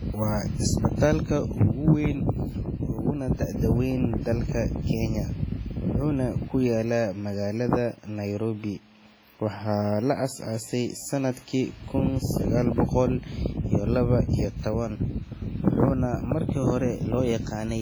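Throughout the speech, heavy damage points to WMA compression, likely an early WMA encoder starved to about 24 kbps. Long transform blocks smear quantisation noise across tens of milliseconds and zero weak detail, so it sounds ringing and washy, with hiss breathing with the speech.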